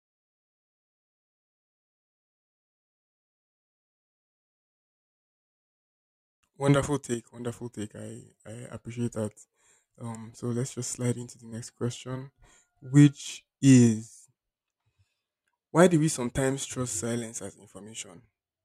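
Speech with two brief level dips. At 7.14 to 7.34 s and again at 17.69 to 17.74 s, the sound drops abruptly by about 6 dB, then returns. One channel drops out is the likely cause, halving the shared signal after the mono sum.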